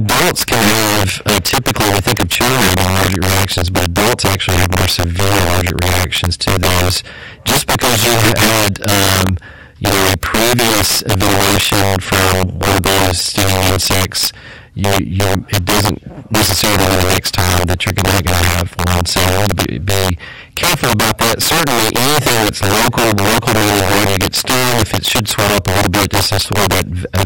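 Integer overflow runs throughout: the level's about 10 dB too hot, so around 7 percent of samples wrap sign rather than limiting, giving violent cracks on peaks.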